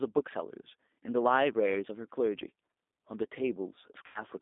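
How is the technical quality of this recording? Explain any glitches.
The technical quality is poor. The speech has been through a low-bitrate telephone codec for the whole clip, and it drops out briefly near the end.

G.729 codec, throughout: The encoder doesn't send the waveform. It sends a vocal tract filter, a pitch value and a few pulse positions per frame, which fits an 8 kbit/s G.729A stream, and the decoder resynthesises speech from those. The result is confined to roughly 250 Hz to 3.7 kHz, with plainly audible roughness and a slightly synthetic edge on the voice.

VoIP packet loss concealed by the speech codec, 4.06 to 4.23 s: About 90 ms of audio never arrived, which points to three lost packets. The decoder filled the gap by repeating its last pitch and filter settings at decreasing gain. The speech is stretched out and fades instead of cutting to silence. Because each frame builds on the previous one, the voice stays weak or distorted for a short while after the packets resume.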